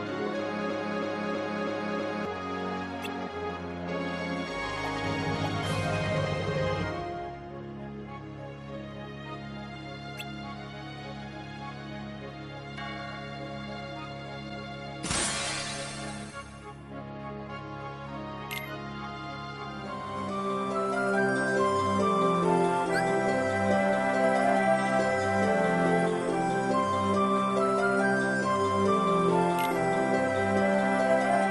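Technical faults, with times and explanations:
0.70–2.25 s, broken-record loop: a 0.32 s piece repeats exactly, five times back to back. Likely a stall resending its last fragment. The intended audio is lost.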